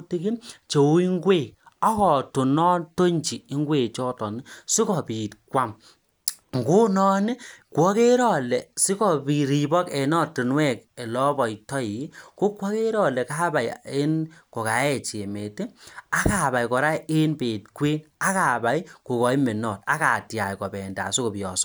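A disc blemish beyond the player's error correction caused CD scratch ticks: three brief, sub-millisecond clicks of patched samples between 10.45 and 10.98 seconds.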